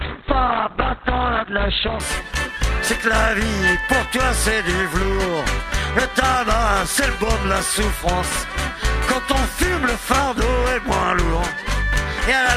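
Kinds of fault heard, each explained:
Adaptive stream starting at a low bitrate: the player opened on a heavily compressed rendition to start fast, which fits roughly 12 kbit/s Opus, then switched up near 2.0 s. Until then the treble is thin or synthetic and artefacts are strong, after which quality jumps cleanly without any gap.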